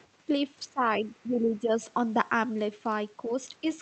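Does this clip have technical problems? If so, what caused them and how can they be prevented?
Yes. Other side's voice leaking through, 0.03 to 0.07 s: a faint scrap of a second voice, roughly 40 dB below the speech, sits at the very start. It is likely loudspeaker echo that the echo canceller left in the microphone signal. To prevent it, use a headset, or give the canceller a well-aligned far-end reference and time to adapt before the talker begins.

Speech suppressed in double talk, 0.65 to 0.84 s, 1.0 to 1.82 s, 3.27 to 3.31 s and 3.61 to 3.66 s: the speech ducks, by around 15 dB at its deepest in the first stretch and less in the others. The likely cause is that the echo canceller could not separate the talker from the echo while both sides spoke, so it pulled everything down. To prevent it, use a headset, or an echo canceller that handles double talk better and applies less aggressive residual suppression.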